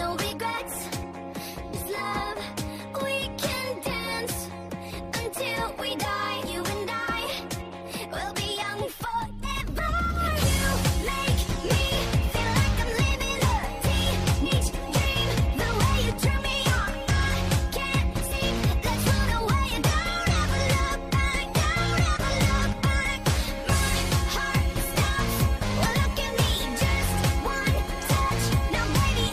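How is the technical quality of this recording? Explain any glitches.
The recording has compressed frames skipped at eight points: 0.57 s, 1.73 to 1.78 s, 6.45 to 6.49 s, 9.43 to 9.47 s, 14.45 to 14.48 s, 18.31 to 18.35 s, 19.77 to 19.80 s and 25.85 to 25.89 s. Groups of frames, which point to a frame length of 20 ms, were lost or rejected by the decoder, so the audio jumps ahead. The skips range from under a tenth of a second to about a third of a second, with the longest at 25.85 s. Each join sounds like an abrupt jump ahead. On a waveform the envelope shifts suddenly, and a spectrogram shows a vertical seam where the content changes discontinuously.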